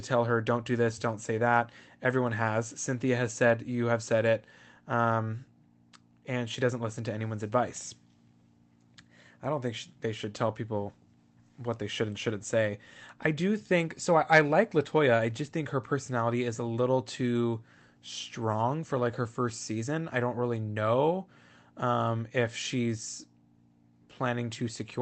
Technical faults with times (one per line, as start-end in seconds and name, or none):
none